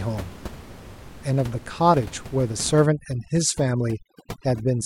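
A speech recording with room noise sitting about 17 dB below the voice, which from 2.86 s to the end shows overdone noise removal: the reducer clamps bands near its noise estimate, leaving near-silence scattered with twinkling specks, seen on a spectrogram as isolated bright dots in a blank floor.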